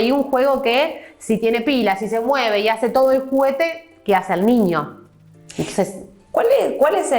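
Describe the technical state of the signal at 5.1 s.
At 5.1 s you're hearing the resampler restarted on every block, a fault that runs through the whole clip. Each 10 ms block was converted from 24 kHz to 48 kHz on its own, so every edge carries a small error, and together those make a 100 Hz buzz riding on the sound.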